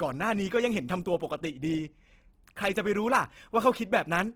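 Opus compression runs throughout: the speech sounds grainy and rough, likely a music-mode encode near 16 kbps noise-filling starved bands, with content reaching 20.3 kHz.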